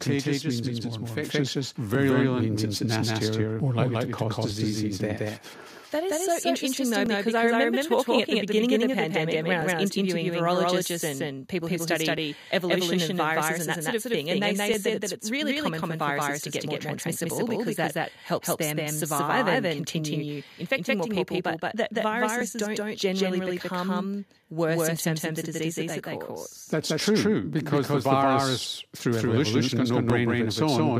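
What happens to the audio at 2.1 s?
At 2.1 s the speech is heard twice: a second, full-band copy at about the same level trails the original by roughly a fifth of a second. This is a doubled audio track, likely from the same signal being captured again over a slower path. The copy has no reverb tail or room colour, so it sounds like a hard slapback rather than an echo. On a spectrogram every syllable's pattern appears twice, offset by that fixed gap, and the waveform shows each envelope repeated with matching height.

This moment also falls inside a run of clock drift buffer slips lasting from 1.95 s to 30.1 s. They recur every 2.56 s, about ten in all, and the first lands at 1.95 s, just before 2.1 s. The likely cause is two devices whose clocks differ by a few hundred ppm, so the buffer between them gradually over- or under-runs until a block of a few dozen samples is dropped or repeated. 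Each slip is heard as a brief click. On the waveform it shows as a small discontinuity, and on a spectrogram as a thin vertical broadband line.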